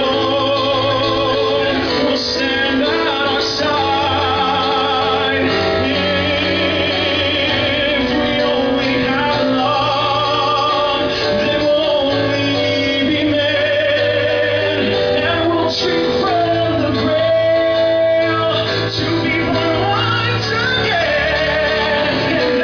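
No technical faults can be heard anywhere in this audio. Nothing in the sound calls for comment.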